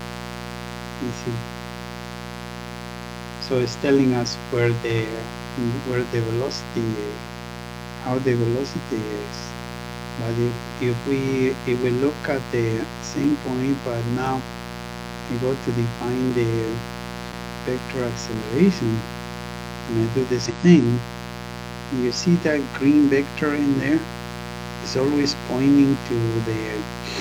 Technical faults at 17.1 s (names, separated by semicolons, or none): mains buzz; periodic USB or driver dropouts